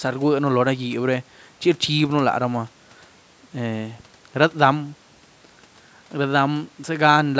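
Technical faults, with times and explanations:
No technical faults can be heard in this speech clip. The call microphone processing keeps everything below 8 kHz, and the room noise sits about 35 dB under the speech.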